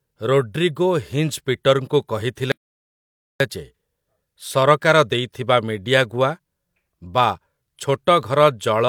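A playback stall runs from 2.52 s to 3.40 s, where the speech cuts off abruptly mid-flow and the output falls completely silent for about 0.89 s before sound returns. The gap is too long and too clean to be a pause in delivery. The likely cause is the player being starved of incoming data, or its audio thread being held up, so nothing reached the output until it caught up and resumed.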